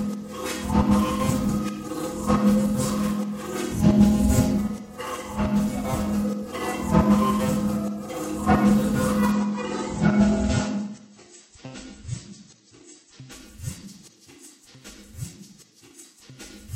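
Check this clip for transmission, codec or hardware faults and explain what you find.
One transmission fault stands out: an adaptive stream at a lower bitrate between 9.32 and 13.32 s. With no gap, the sound abruptly loses its brightness, with nothing above about 8.3 kHz, and takes on a thinner, swirly, artefact-laden texture until full quality snaps back. A slowing connection made the player switch to a lower-bitrate rendition for those four seconds, which fits a drop from 128 to 32 kbit/s MP3, where the encoder discards treble to save bits.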